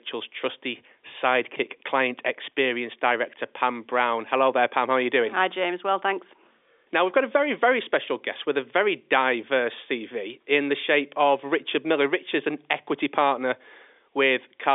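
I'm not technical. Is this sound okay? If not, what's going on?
Yes, nothing has gone wrong in this recording. It comes through G.711 telephone coding, the standard landline phone format, so it has the narrow, slightly muffled sound of a phone call, with nothing above about 3.8 kHz.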